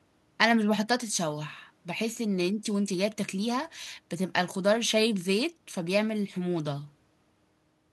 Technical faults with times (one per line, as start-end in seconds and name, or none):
none